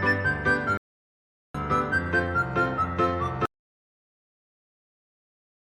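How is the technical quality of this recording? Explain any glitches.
Two clear glitches here. At 0.77 s there's a stream reconnect: the connection dropped, the player sat silent for 0.77 s, then a fresh decoder picked up mid-stream. When it resumes around 1.56 s, the sound has jumped ahead by roughly 0.4 s, so a chunk is simply skipped.

Then from 3.46 s right to the end there's an audio dropout to silence. The sound cuts off mid-flow into silence, with no room tone at all. That's most likely the input being lost while the recorder kept writing.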